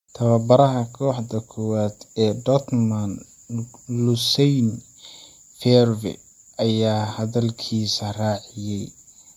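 Right from the start the speech has a swirly, hollow smear, with consonant attacks blurred and nothing above 20.1 kHz. That's generation loss, likely from being MP3-encoded about five times over at a rate that fits roughly 93 kbit/s, each pass piling up fresh artefacts.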